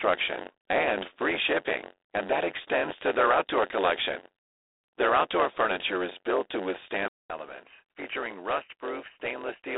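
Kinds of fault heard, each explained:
Block size mismatch (padded): Each block is written shorter than it's read, and the gap is filled with zeros. That produces a steady buzz at about 92 Hz through the whole clip, with the speech running at 0.919 times normal speed while the timbre stays.
G.726 ADPCM: This codec sends only a coarse difference from a running prediction. The harsh, rasping hiss that rides up and down with the speech level fits the 24 kbit/s mode. The line band sits roughly at 300 Hz to 3.7 kHz, with nothing above 3.8 kHz.
Input switched to a poorer device: At 7.08 s there's a 200 ms silence, and then the sound turns duller and narrower. It also drops about 5 dB in level and gains a faint new noise floor, likely from the input moving to a worse microphone or a headset call profile.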